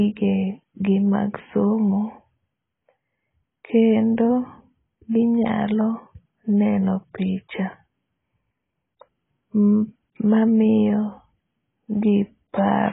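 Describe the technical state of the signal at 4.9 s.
At 4.9 s the speech is dull and band-limited, with nothing above about 3.8 kHz, and the same damage runs through the whole clip. This is likely AAC compression at a very low rate, fitting roughly 16 kbps AAC-LC, where the encoder drops the top band and starves the remaining frequency lines. A plain low-pass filter would only darken the sound. Here sibilants turn fizzy and sustained vowels warble and smear, which marks heavy codec damage.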